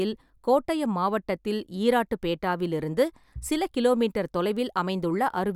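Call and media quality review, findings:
No faults found in this recording.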